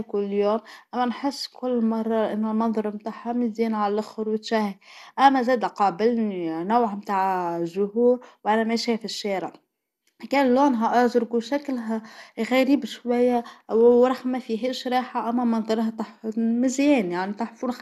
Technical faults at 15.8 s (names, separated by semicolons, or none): MP2 compression